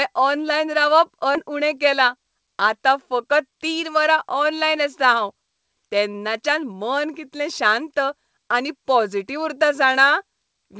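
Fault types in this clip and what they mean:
Skip ahead: at 1.35 s roughly 0.3 s of speech vanishes and both sides join directly, with no silence or filler, unlike a dropout.
Jitter buffer speed-up: from 1.90 to 2.25 s speech runs about 112% fast as roughly 50 ms is trimmed, but pitch stays unchanged, unlike resampling.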